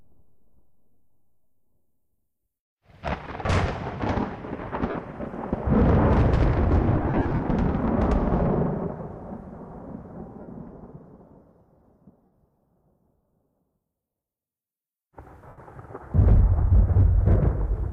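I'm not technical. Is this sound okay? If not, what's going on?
No. The sound has brief dropouts caused by lost LE Audio frames. Small chunks of audio went missing over a Bluetooth link. The receiving device filled each gap by reusing the last sound it had, slightly scrambled. That makes a short noisy smear. Listen at 4.90, 10.41, 12.25 and 15.48 seconds. The worst spot runs from 6.95 to 7.42 seconds, where many small gaps bunch together. The light compression is faint, a slight watery texture at most.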